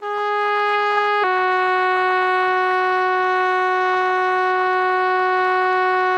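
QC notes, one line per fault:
1.24 s to the end, section at the wrong speed: right at 1.24 s the music drops into a slower, lower gear and stays there. It's running at 0.893x, so everything stretches out and sits about two semitones flat, with tempo and pitch sagging together instead of independently. That coupled shift is the giveaway. It's likely a clock mismatch at an edit or in playback, with this stretch resampled against the wrong rate.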